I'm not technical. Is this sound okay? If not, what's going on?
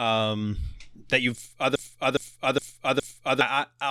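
No, there's a problem. Right after "that you've", at about 1.76 s, the speech gets stuck in a broken-record loop. A short scrap, roughly 0.41 s long, plays four times back to back until about 3.41 s, sounding like a skipping CD. What likely happened is that the player or stream stalled and kept replaying the last bit it had. Whatever should have been said in that stretch is simply gone.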